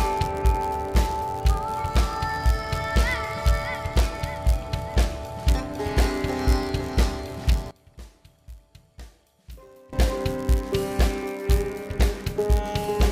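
A block size mismatch (padded) runs through the whole clip: one stage delivers slightly shorter blocks than the next one reads, and the leftover space is zero-filled. The repeating gaps produce a steady buzz near 91.5 Hz, and the sound plays marginally slow, at 0.996 times normal speed.

From 7.71 to 9.93 s, one channel inverted is the likely cause of a sudden collapse in level of about 22 dB. When the channels are combined to mono, everything they share cancels. Only a faint remnant of their differences survives until the level returns at 9.93 s.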